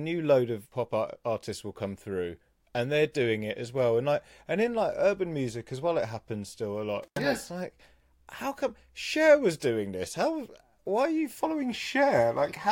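At 7.03 s, after "happens still a lot", the speech drops out. This is an intermittent contact: a loose plug or cable opened for 83 ms. Crackle marks both edges, with faint hiss between. Sound returns by 7.22 s, before "yeah it's like how".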